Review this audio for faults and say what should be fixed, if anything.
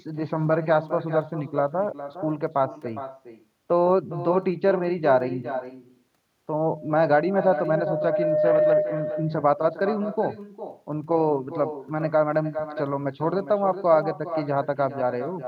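Echo with no canceller runs through the whole clip. The far end's loudspeaker leaks into its microphone and returns the speech around 0.4 s later, about 11 dB quieter. On a spectrogram, each burst reappears as a fainter, smeared copy. Enable acoustic echo cancellation at the far end, or have that side use a headset.

Loudspeaker feedback squeal runs from 6.67 to 9.00 s. A microphone-speaker loop with gain above one at 608 Hz swells over roughly two seconds to about 5 dB above the speech. A spectrogram shows it as one bright horizontal line that strengthens over time. Lower the loop gain, move the microphone away from the loudspeaker, or notch out 608 Hz.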